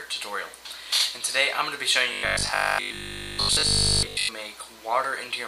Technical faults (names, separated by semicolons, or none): robotic sound from repeated short buffers